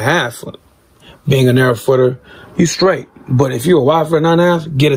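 Gain pumping runs through the whole clip: the gain swings by around 15 dB, leaving loud and soft parts squashed together. The likely cause is input gain set far too high, with a fast limiter clamping down on each peak.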